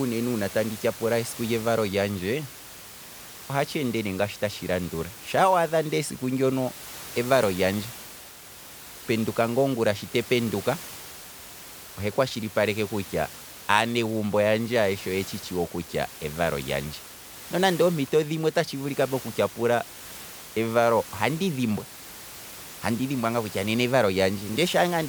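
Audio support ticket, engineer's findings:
No faults found on the speech path. Room noise is audible underneath, about 17 dB below the speech, and belongs to the recording environment.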